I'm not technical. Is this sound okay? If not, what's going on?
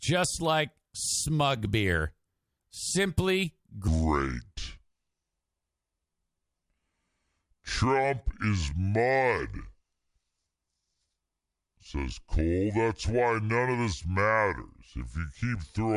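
No. From 3.88 s onward there's a wrong sample rate: the sound plays at two-thirds speed, so the speech drags and drops about seven semitones lower.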